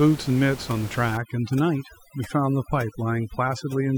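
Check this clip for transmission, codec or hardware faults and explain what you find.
There's one processing fault here. From 1.17 s to the end, overdone noise removal clamps down hard on bands near the noise estimate, leaving the speech over near-silence with twinkling specks. The room noise before that, about 15 dB below the speech, is simply part of the recording.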